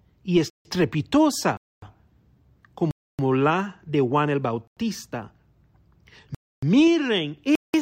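Speech interrupted by six blocks of digital silence, at 0.5, 1.57, 2.91, 4.67, 6.35 and 7.55 s, lasting 90 to 280 ms. Each cuts out and back with no fade, and the blocks at 4.67 and 7.55 s fit 4096- and 8192-sample buffer underruns.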